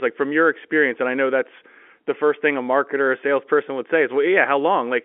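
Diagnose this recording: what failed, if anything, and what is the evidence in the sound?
Nothing stood out on listening; the speech carries the narrow band of an ordinary telephone line, with no dropout, click, distortion or timing fault anywhere in it.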